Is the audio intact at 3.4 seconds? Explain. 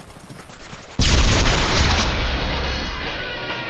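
No, at 3.4 seconds the audio is still inside a call bitrate drop that runs from 0.51 s to the end of the clip. The encoder's rate falls from 48 kbps to 8 kbps and stays at that floor for 1.54 s. At so few bits the codec quantises coarsely and narrows the audio band from 20 kHz to 8 kHz. The sound therefore comes through rough and watery, and muffled with the top end gone, rather than clean.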